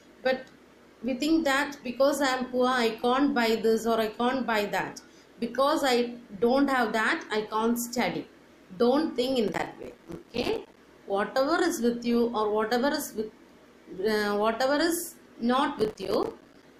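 Processor overload crackle: the processor repeatedly missed deadlines for short buffers of roughly 5 ms, leaving dozens of silent gaps that tear the audio from 9.48 to 10.77 s and 15.79 to 16.63 s.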